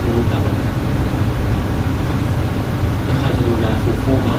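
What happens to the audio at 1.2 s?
Nothing goes wrong at 1.2 s; the speech continues intact through that moment, with no dropout, click or other audible fault.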